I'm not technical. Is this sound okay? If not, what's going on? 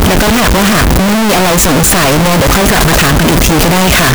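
No. From start to finish the speech comes with very loud, harsh distortion, and the quiet moments and pauses blare as loudly as everything else. This is most likely signed and unsigned samples mixed up: the playback reads each sample's sign the wrong way, which fits 16-bit audio. Every time the waveform crosses zero, it jumps from one extreme to the other, turning the gentlest passage into a harsh crackle.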